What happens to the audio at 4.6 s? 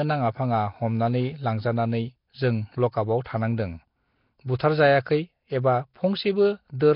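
At 4.59 s a short hiss of about 12 ms runs just ahead of a sharp onset, softening and smearing the attack. This is pre-echo: the transform codec spreads its block's quantisation noise evenly, so noise sized for the loud attack also fills the quiet moment before it. This sits on top of heavy damage throughout the clip, a rough, hissy, underwater-sounding smear with nothing above 5.3 kHz, likely from Nellymoser compression, the old Flash microphone codec.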